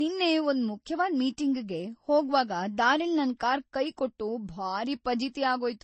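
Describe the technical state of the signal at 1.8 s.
At 1.8 s the speech carries the same degradation heard from start to finish: nothing above 8.3 kHz, a dull, band-limited top end, and a mix of artefacts from the different codecs heard together. That combination points to transcoding between lossy codecs, likely an MP3 stage followed by Vorbis, both at low bitrates. The second encoder wastes bits re-coding the first one's artefacts, adds its own, and the lower cut-off persists.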